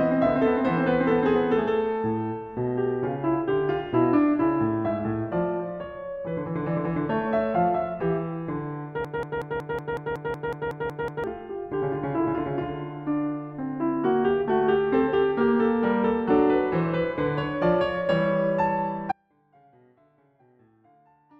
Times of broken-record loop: 9.05-11.24

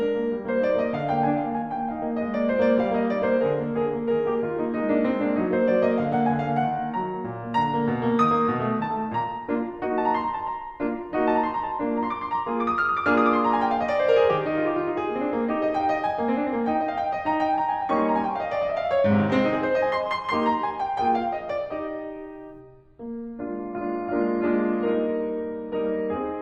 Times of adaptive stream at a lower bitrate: 22.60-26.41

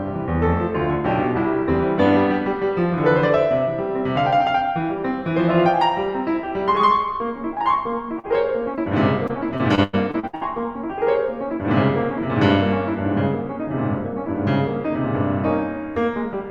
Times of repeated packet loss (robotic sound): 9.27-10.43

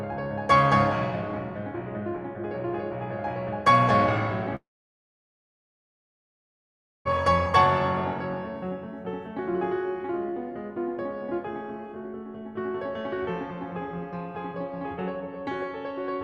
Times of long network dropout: 4.55-7.07

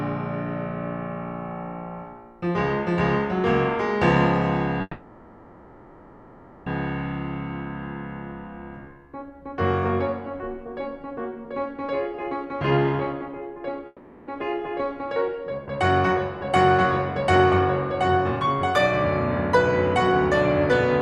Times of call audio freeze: 4.81-6.68, 13.87-14.30

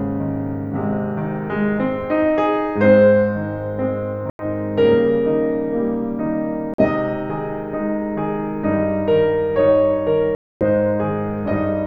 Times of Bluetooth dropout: 4.30-4.45, 6.74-6.85, 10.35-10.63

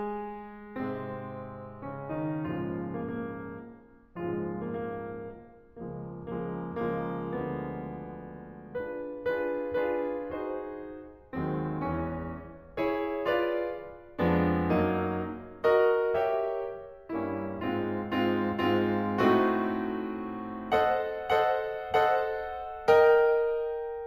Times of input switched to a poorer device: none

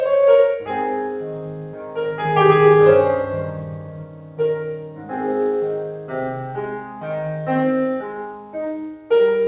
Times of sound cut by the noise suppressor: 0.88-1.97, 3.82-4.39, 4.77-5.11, 8.35-8.54, 8.94-9.10

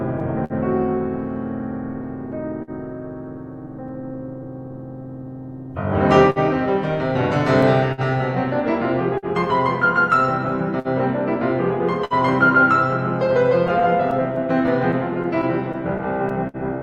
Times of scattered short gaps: 2.32-3.92, 6.30-16.57

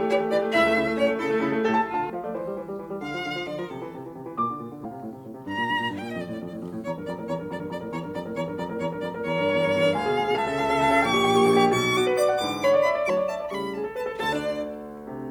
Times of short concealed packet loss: none

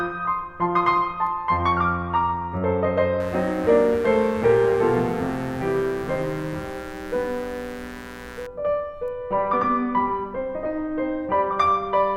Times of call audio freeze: none

